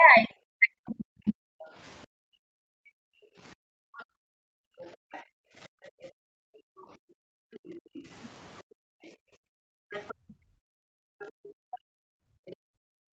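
From the start to 1.44 s the talker's speech is pulled down hard, by something like 40 dB at its deepest, for roughly a second and a half. This is speech suppressed in double talk, likely the echo canceller mistaking the near talker for loudspeaker echo while both sides spoke and attenuating everything. On a waveform the envelope dips. On a spectrogram the harmonics thin out.

From 1.72 s to the end, the room sound between phrases is clamped down by up to about 40 dB. This is background gated by the echo canceller: while the far end plays through the loudspeaker, the canceller suppresses the microphone, and the ambience dips or drops out. A spectrogram shows the noise floor dropping to near-black, and the waveform's quiet sections flatten to almost nothing.

Between 3.97 and 8.01 s, a faint second voice sits underneath, at roughly 30 dB below the speech. It returns from 9.91 to 12.56 s a little stronger, around 25 dB down. 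This is the other side's voice leaking through, likely residual echo the canceller failed to remove. It shows as weak harmonic traces that don't line up with the main talker's.

Two brief double-talk dips also appear, at 10.3 s (about 30 dB) and at 12.9 s (about 40 dB), each lasting a tenth of a second or less. Each shows as a narrow notch in the envelope and a thin vertical gap in the spectrogram.

Throughout, nothing appears above 8 kHz, which fits wideband call coding.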